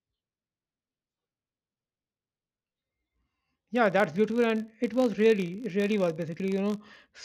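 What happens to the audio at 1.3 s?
At 1.3 s the filter restarted on every block is audible, as it is across the whole clip. The filter drops its memory at each block boundary and starts again from silence, so every block opens with a small click. These clicks repeat at 50 Hz, a block length of about 20 ms, forming a buzz that rises and falls with the speech's level.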